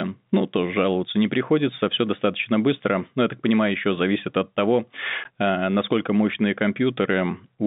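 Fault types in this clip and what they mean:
Packet loss filled with silence: a packet never arrived and the receiver played dead air instead, so at 5.24 s, between "еще зависит от того" and "э насколько мощные", there's a 10 ms hole with hard edges, which fits a single lost packet.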